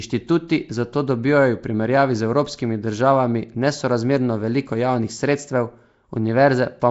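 Nellymoser compression, throughout: the speech carries a rough, hissy halo and smeared, underwater quality, with nothing above 7.7 kHz, likely from a low-bitrate Flash-era codec filling starved bands with noise.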